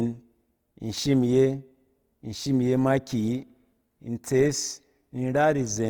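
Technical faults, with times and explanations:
Throughout, Opus compression: the speech sounds rough and grainy, with a noisy, gritty texture laid over its tones rather than a swirling or watery character, and the damage is plainly audible across the whole clip. The full bandwidth survives, with content reaching about 20.1 kHz. This is likely a low-rate Opus encode in its music mode, around 24 kbps, which keeps each band's energy but fills starved bands with noise or copied lower bands.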